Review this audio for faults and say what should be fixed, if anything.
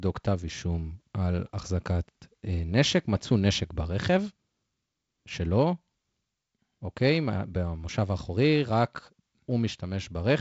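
No faults; nothing to fix.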